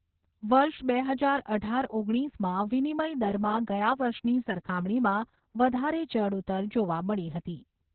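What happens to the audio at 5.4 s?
At 5.4 s the speech carries the Opus voice compression heard across the whole clip. Its narrowband SILK coding leaves nothing above 4.3 kHz and codes the excitation coarsely, which fits about 6 kbps. Unlike a plain low-pass filter, it sounds hoarse and slightly robotic as well as muffled.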